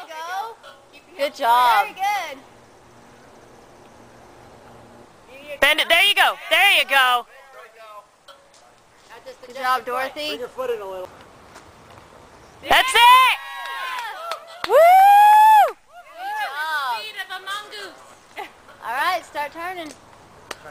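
Nothing stood out as a technical fault on listening to this recording.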